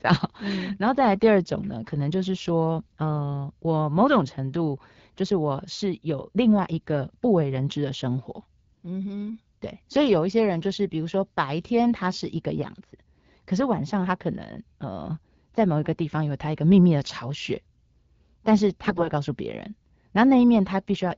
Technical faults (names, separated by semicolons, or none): AMR bit errors